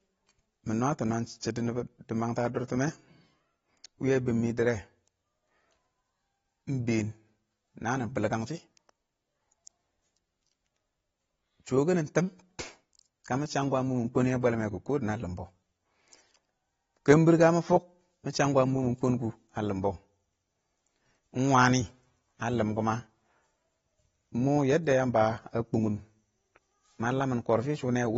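Speech, with plainly audible AAC compression damage throughout. Nothing is present above 7.7 kHz, so the sound is dull and smeared. The likely cause is AAC-LC coding at a bitrate consistent with about 24 kbps, where coarse quantisation against the hearing model discards high bands.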